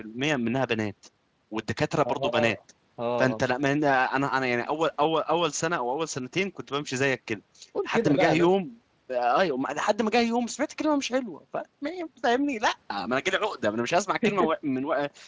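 No technical faults turn up anywhere in the speech. The audio carries the usual traits of a call path, with nothing above 8 kHz after the microphone processing and only a light Speex codec coloring.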